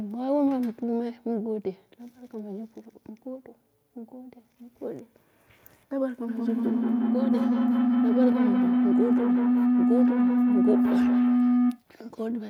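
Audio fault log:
6.28–11.89 s: feedback howl, a microphone-to-loudspeaker loop gaining level each pass, narrowing to around 300 Hz, pulsing about every 200 ms, peaking about 5 dB above speech.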